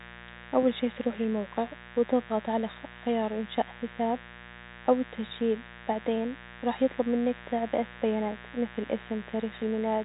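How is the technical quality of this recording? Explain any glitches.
The recording has one persistent fault, a mains buzz, heard through a telephone-band channel whose G.711 coding cuts everything above about 3.8 kHz.

Mains buzz runs through the whole speech clip. Sharp switching spikes from poorly shielded wiring or a dimmer-type load enter the signal path twice per 60 Hz cycle, producing harmonics well up the band. The result is a steady, raspy buzz sitting roughly 20 dB below the speech.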